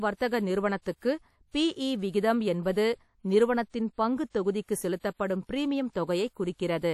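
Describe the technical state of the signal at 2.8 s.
At 2.8 s the speech carries the same degradation heard across the whole clip: plainly audible codec damage, most likely from WMA compression. The transform encoder's long blocks smear quantisation noise over tens of milliseconds, so the speech rings and sounds washy, with a hiss that swells and fades with the signal. Weak spectral detail has been discarded, nothing remains above 16.6 kHz, and the damage fits a stream of about 48 kbps.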